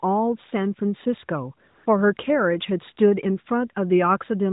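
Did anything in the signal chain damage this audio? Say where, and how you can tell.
Yes: AMR comfort noise at the codec, 1.68 to 1.86 s. Speech frames stop for 180 ms and smooth synthetic hiss replaces the real background, unlike a dropout's dead silence.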